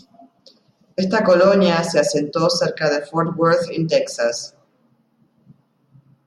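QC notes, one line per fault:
No fault found in this speech clip.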